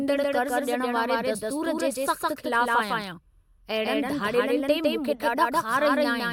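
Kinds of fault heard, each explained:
Doubled audio track: the speech is heard twice throughout, a second full-band copy trailing the first by roughly 150 ms at about equal loudness, with no decay or room colour, most likely from the signal being captured again through a slower path.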